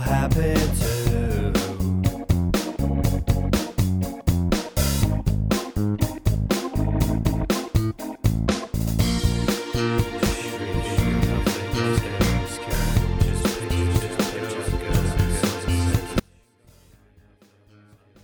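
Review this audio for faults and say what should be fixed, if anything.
An audio dropout to a faint residue starts at 16.2 s and runs to the end. Only a faint leak remains, roughly 35 dB down. The likely cause is a broken feed into a live path. Secure and test every connection before recording.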